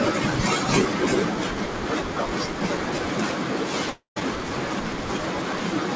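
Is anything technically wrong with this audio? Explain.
Yes. From 3.90 to 4.18 s the speech breaks off in what is likely a long network dropout: roughly a quarter-second of packets never reached the receiver. The receiver filled the gap by extending the last sound, heard as a brief fading buzz that thins to silence for about 120 ms, before the speech resumes with that stretch simply gone. This runs through a G.722 call path at 64 kbps, so nothing sits above 8 kHz.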